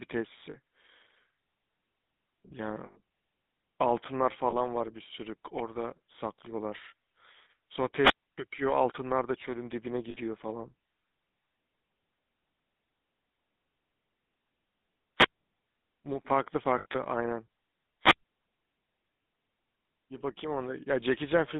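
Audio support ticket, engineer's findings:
Buzzy, gravelly roughness across the whole speech clip, plainly audible. Band limited to roughly 150 Hz to 3.7 kHz, nothing above. Probable component: GSM full-rate codec on the phone leg, consistent with the 13 kbps full-rate coder. Mechanism: vocal-tract model driven by a thinned, regularly spaced pulse excitation. Only every third excitation sample survives, so the fine texture of the voice becomes a coarse buzz.

Short rough, metallic rings where speech should continue, at 0.50 s (40 ms), 2.86 to 2.99 s (100 ms), 4.50 s (20 ms), 6.82 s (20 ms), 10.10 s (40 ms) and 16.78 to 16.96 s. The last one is patchy, with gaps scattered over 160 ms and a longest run around 70 ms. Probable component: lost GSM frames on the radio link. Mechanism: the decoder repeats the last good frame's settings, usually at falling level from the second lost frame on, which fits runs of lost 20 ms frames.

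Hiss swells briefly, then near-silence, then speech returns. Holes at 8.00 to 8.38 s (about 281 ms muted), 15.16 to 15.40 s (about 153 ms) and 18.00 to 18.25 s (about 138 ms). Probable component: analogue FM wireless microphone receiver. Mechanism: wireless microphone squelch dropout. RF level fades, noise rises, and the squelch gate mutes the output until the carrier recovers.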